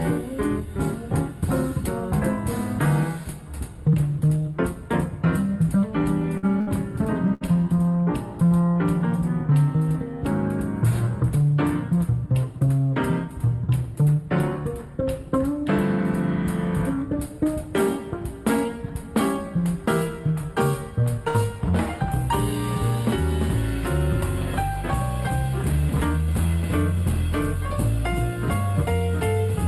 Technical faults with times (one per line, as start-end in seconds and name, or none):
6.37-7.84 repeated packet loss (robotic sound)
8.46-8.54 short stall from a late packet
21.28-21.37 burst of packet loss